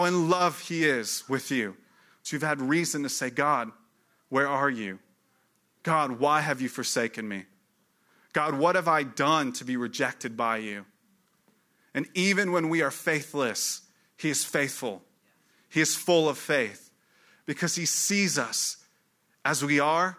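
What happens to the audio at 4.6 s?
Nothing goes wrong at 4.6 s: the speech carries on intact through that moment, with no dropout, click or distortion.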